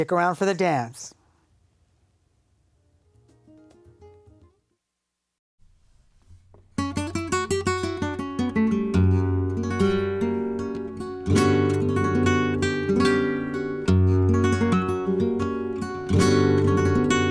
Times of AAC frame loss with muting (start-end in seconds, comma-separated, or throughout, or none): none